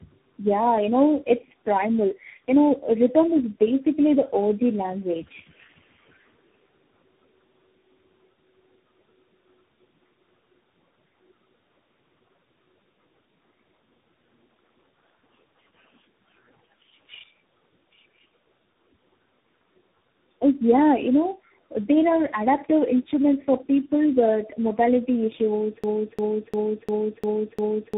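Tandem speech coding runs through this speech clip: it sounds rough, muffled and warbly, with nothing above 3.8 kHz, which fits several speech codecs in a row, each re-coding the last one's output. A broken-record loop starts at 25.84 s and lasts to the end, a 0.35 s fragment repeating six times back to back, likely from a stalled player or stream resending its last buffer.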